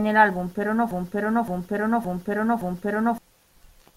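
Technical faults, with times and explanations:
0.91–3.18 s, broken-record loop: after "el álbum pero no", a 0.57 s piece repeats exactly four times. Likely a stalled stream resending its last fragment.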